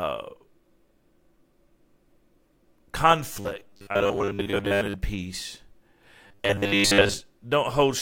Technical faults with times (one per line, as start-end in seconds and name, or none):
3.33-4.95 robotic sound from repeated short buffers
6.27-7.14 robotic sound from repeated short buffers